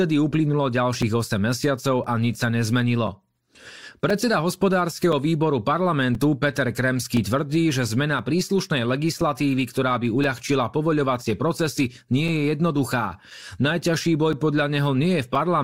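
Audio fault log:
1.02 to 15.35 s, periodic USB or driver dropouts: a short tick recurs every 1.024 s, about fifteen times across the speech. Each tick is a gap of roughly 4 ms where the audio drops to silence. Something blocks the USB bus or the audio driver on a fixed schedule, so a few milliseconds of samples never arrive. The sudden cut to silence and back makes a click. The even spacing gives the steady beat.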